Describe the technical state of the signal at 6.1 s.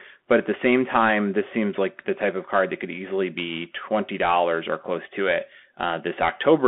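Bluetooth CVSD headset codec damage is present at 6.1 s, as it is throughout. Each sample is one up-or-down bit with an adapting step, so loud high sounds outrun the step and distort, s sounds turn scratchy over granular hiss, and the band stops near 200 Hz and 3.4 kHz.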